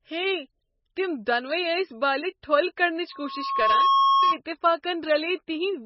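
Throughout, the speech sounds watery and swirly, with nothing above 5.6 kHz. This is likely heavy MP3 compression at a very low bitrate, around 17 kbps.

From 3.12 to 4.39 s, a steady 1.1 kHz tone swells over less than a second to about 5 dB above the speech. This is loudspeaker feedback squeal: the microphone picked up its own loudspeaker and the loop kept amplifying that frequency.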